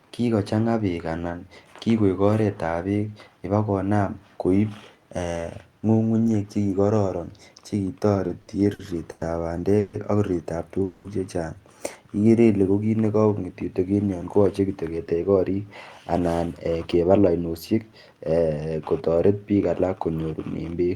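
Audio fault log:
7.99–9.23 s, repeated stalls (stutter): The speech halts six times in quick succession. Packets arrived more slowly than they were played, so the jitter buffer kept running dry and the receiver stretched the last sound to cover each gap. The longest gap is 100 ms, and about 260 ms in all, roughly a fifth of the span, is filled. Nothing is lost, but the delivery lurches. A spectrogram shows short smeared, repeated frames breaking the speech pattern, and the waveform shows uneven flattened stretches.
9.79–9.95 s and 10.84–11.06 s, call audio freeze: The sound hangs for 140 ms and then for 200 ms as a continuation of the last moment, and never drops to silence. The likely cause is packets held up in transit, which emptied the jitter buffer. When they arrived, playback resumed where it stopped, so each pause pushes the rest of the audio later by its own length. On a spectrogram each pause appears as a horizontally smeared, fading band. 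The waveform shows a repetitive, decaying stretch.
12.21–12.65 s, jitter buffer slow-down: Here the speech drags to 89% of its normal rate while the pitch stays the same, so sounds are drawn out. The buffer was low or had just raised its target delay, and the receiver rebuilt its reserve by repeating single pitch periods, adding 57 ms over the span. On a spectrogram the harmonics stay at the same heights but stretch sideways. The waveform shows near-identical cycles repeated back to back.
14.40–15.58 s and 16.12–18.12 s, jitter buffer speed-up: The speech hurries to about 110% of its normal rate with unchanged pitch. The buffer held more audio than its target, so the receiver trimmed pitch-period-sized pieces again and again, removing around 150 ms in the first run and around 200 ms in the second. A spectrogram shows compressed syllables with the harmonic spacing intact. The waveform shows cycles joined slightly early, with no visible gaps.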